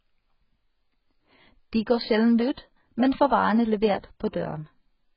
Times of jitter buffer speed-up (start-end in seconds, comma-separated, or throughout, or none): none